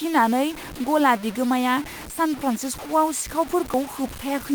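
From start to finish the speech carries a gritty, grainy distortion that rises and falls with the voice. It sits only roughly 15 dB below the signal, and quiet tails sputter. That points to low bit depth without dither, likely about 5 bits with truncation. Unlike steady hiss, this error tracks the sound.

At 0.74 s, just before "गला बिगोमाया सान", there is a sudden jump forward of around 20 ms. At 1.93 s, right after "गला बिगोमाया", and again at 3.74 s, similar jumps skip roughly 50 ms. No silence fills the joins, which sets these apart from dropouts. They point to a dropped buffer (overrun), likely samples overwritten before being read.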